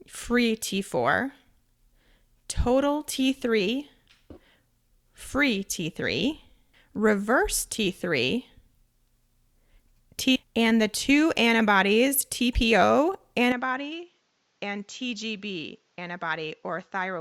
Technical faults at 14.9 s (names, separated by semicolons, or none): input switched to a poorer device